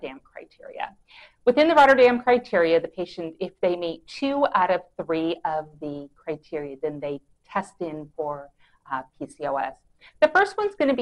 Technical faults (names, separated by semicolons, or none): none